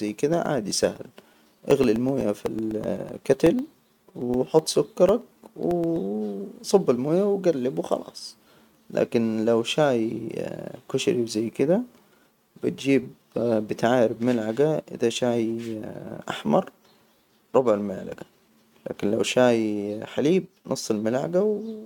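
From 0.09 s to 5.96 s the speech carries periodic USB or driver dropouts: a steady ticking, one click every 0.125 s, roughly fifty in all. Each tick is a gap of about a millisecond where the samples went missing and silence took their place, as if something stalled the USB bus or audio driver on a fixed schedule. The ticks are heard only under the voice, and the even spacing makes them read as a mechanical rhythm.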